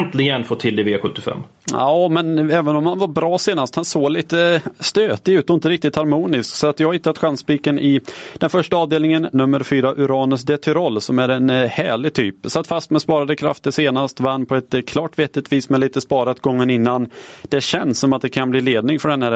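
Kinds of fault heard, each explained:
Gain pumping: gain swings roughly 10 dB, pulled down under every loud bit, likely from mic gain cranked too high into a fast limiter.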